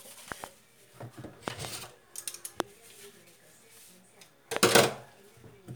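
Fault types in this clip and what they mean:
Loud pop: sharp transients sit on top of the sound, which carries on underneath, most likely from a voltage step or spike such as a plug, switch, static or driver glitch that the following circuitry shapes into a click. Double pops occur at 0.32 to 0.46 s and 1.48 to 1.67 s, and single pops at 2.60 s and 4.57 s. The peaks stand well above the signal, about 15 dB at first and rising to about 25 dB.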